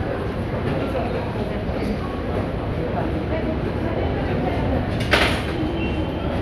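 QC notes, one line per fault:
3.11 to 3.96 s, jitter buffer speed-up: the receiver's buffer had built up more audio than it targets, so it trimmed short pitch-period-sized pieces back to back, dropping roughly 70 ms in total. The sound plays about 7% fast with its pitch unchanged, giving a rushed feel. On a spectrogram the harmonic lines stay at the same height but events bunch closer in time; the waveform shows tiny seamless splices with whole periods missing.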